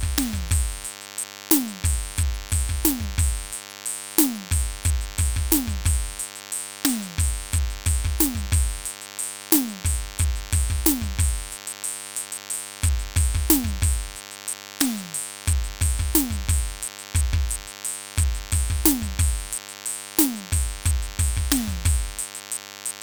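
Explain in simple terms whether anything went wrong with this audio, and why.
Yes: a DECT cordless phone buzz runs under the music throughout, a thin, raspy 100 Hz drone, fairly prominent, and edgier than smooth mains hum.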